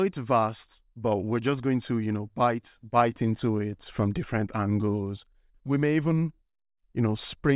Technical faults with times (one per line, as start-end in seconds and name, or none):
none